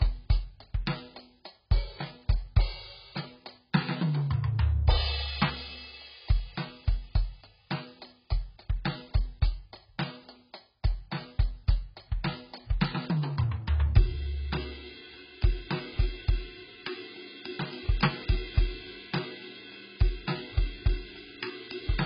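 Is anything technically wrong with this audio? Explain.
Yes. Throughout the whole piece of music, the sound is dull and smeared, with nothing above 5.1 kHz and a warbling, fizzy texture on sustained notes. This points to heavy AAC compression, likely AAC-LC at a very low bitrate in the region of 12 kbps. At that rate the encoder discards the upper spectrum and quantises the remaining frequency bands so coarsely that gaps open and shift from frame to frame, producing the unsteady swirl.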